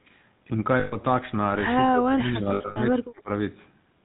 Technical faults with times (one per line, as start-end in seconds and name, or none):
0.00-4.05 GSM full-rate codec
0.80-0.96 lost GSM frames
1.88-3.29 speech suppressed in double talk
2.48-2.79 lost GSM frames